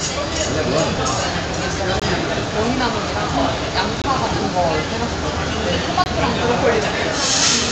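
At 2.00 to 2.02 s, 4.02 to 4.04 s and 6.04 to 6.06 s, a gap between chunks leaves a 21 ms hole every 2.0 s; unlike a dropout, no sound goes missing.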